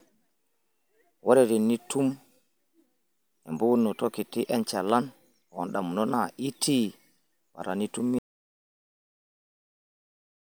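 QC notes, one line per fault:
8.19–10.53 s: audio dropout to silence. Speech cuts off mid-flow into silence with no room tone, likely from lost input while recording continued.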